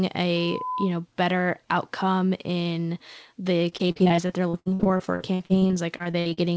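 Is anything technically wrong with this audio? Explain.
Yes, there are two faults, heard through a call path whose spectrum stops at 8 kHz.

From 0.36 to 0.95 s, just before "better outcome in the", there is loudspeaker feedback squeal. A microphone re-captured its own loudspeaker, and at 1 kHz the loop gain passed one. That tone swells over roughly a third of a second to about the level of the speech, then stops. On a spectrogram it appears as a bright horizontal line at 1 kHz. The waveform envelope rises steadily over the first 0.3 s of that span.

From 3.70 to 6.39 s, right after "better outcome in the", there is repeated packet loss, which makes the speech sound robotic. The stream keeps dropping short chunks, which points to roughly two dozen separate losses. Each hole is patched by stretching the preceding sound. The longest hole is 63 ms, and about 29% of the span is concealed. The result is choppy, with pieces missing. 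A spectrogram shows repeated smeared, frozen slices, and the waveform shows repeated, copy-like segments.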